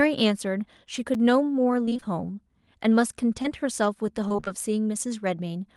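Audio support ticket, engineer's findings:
Block of digital silence at 1.14 s: single tick, a 5.3 ms hole cut hard with no fade, which fits a 256-sample buffer left unfilled in the playback or processing stage. It differs from packet loss because nothing is filled in. The gap is an empty hole, not a smeared continuation of the preceding sound.

Repeated packet loss (robotic sound) at 1.86–2.04 s: choppy speech with pieces missing. Five gaps in 0.18 s, longest about 21 ms, with concealment covering about 44% of the span. Probable cause is jitter buffer or network delivery.

Repeated packet loss (robotic sound) at 4.28–4.48 s: same choppy sound with pieces missing. Five gaps, longest about 24 ms, with about half the span concealed. Unlike a single loss, the holes recur before the decoder can recover. It also differs from the silence block because the gaps are filled, not empty.

Short concealed packet loss at 3.42–3.46 s: brief smear or wobble. 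About 20 ms went missing and was filled by extending the last sound before blending back. It is a single isolated event, so it gives no chopping. This is decoder-side concealment within the Opus call path (32 kbps, 12 kHz audio bandwidth).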